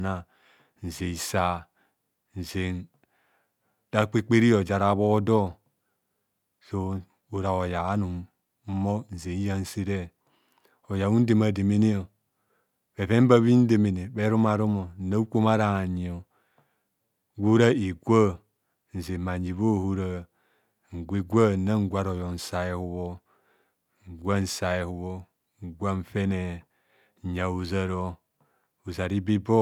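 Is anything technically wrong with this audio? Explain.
No, nothing technically wrong turns up on listening; the speech carries no audible fault from beginning to end.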